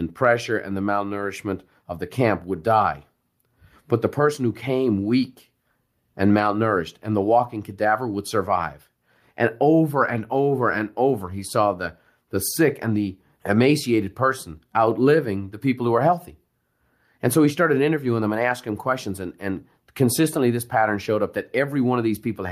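Speech recording, no technical faults detected.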